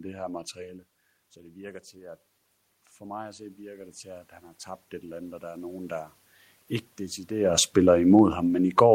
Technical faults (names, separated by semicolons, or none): automatic gain rising; automatic gain falling